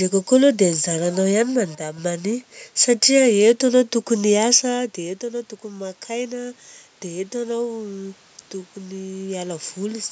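At 1.75 to 1.98 s the level drops by about 6 dB for a moment, likely one channel dropping out of the stereo pair before the mono sum. Around 4.5 s the talker moves back and the input falls about 13 dB, so from 4.78 to 8.24 s the automatic gain rises, slowly lifting voice and room noise together by about 5 dB.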